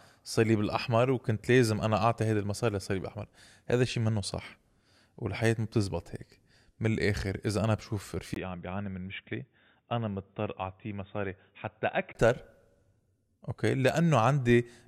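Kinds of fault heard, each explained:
Input switched to a poorer device: from 8.34 s to 12.15 s the speech turns dull and boxy, with nothing above 3.8 kHz. It is about 5 dB quieter and carries its own faint background noise, roughly 55 dB down. A brief gap of around 20 ms marks the change at 8.34 s. The recording likely jumped mid-take to a narrower-band microphone or headset profile, and the fuller sound returns at 12.15 s.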